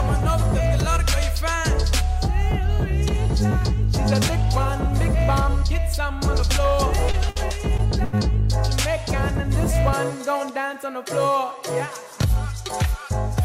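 Between 7.11 and 8.15 s four dropouts cluster. At 7.11 to 7.15 s a short concealed packet loss leaves about 20 ms missing, patched by briefly extending the preceding sound, heard as a brief smear or wobble that blends straight back. From 7.29 to 7.37 s comes a burst of packet loss. About 60 ms is gone, and the filler continues the last sound while turning it down, so it comes across as a held buzz or fading hiss, followed by a jump forward where material is absent. Another short concealed loss at 7.77 to 7.80 s repeats the brief smear. A second burst at 8.04 to 8.15 s loses about 80 ms, giving a longer decaying hold before the skip. The bursts differ from the short concealed losses in their audible fade and clear gap.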